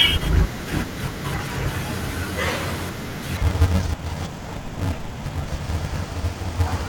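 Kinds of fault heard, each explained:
Interleaved audio read as planar: from 3.37 s to the end, the speech turns dull and robotic with a buzz at 375 Hz. Alternating left-right samples in each 2.67 ms block, likely 128 samples, are split into halves and played as separate channels, too short for an octave drop.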